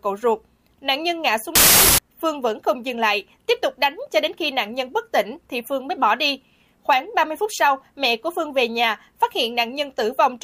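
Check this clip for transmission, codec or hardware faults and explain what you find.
One fault stands out: a burst of wrong sample width from 1.55 to 1.98 s. The bytes seem to be grouped three per sample instead of four, which fits 32-bit data read as packed 24-bit. Most values mix bytes from neighbouring samples, so loud broadband noise buries the sound, which plays at 0.75x speed with lowered pitch. On a spectrogram, that stretch fills with dense noise up to the top band; the waveform jumps to a dense, hash-like block.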